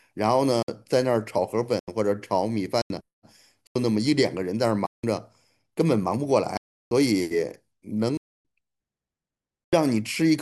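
At 0.63 s the speech drops into a block of digital silence lasting 56 ms, followed by further blocks at 1.79, 2.82, 3.67 and 9.64 s (85 ms each), 4.86 s (171 ms), 6.57 s (341 ms) and 8.17 s (275 ms). Each gap starts and ends abruptly. The shortest gaps sound like brief holes and the longest like dropouts. The recurring 85 ms length and its doublings fit an output buffer of 4096 samples at 48 kHz that was not filled in time.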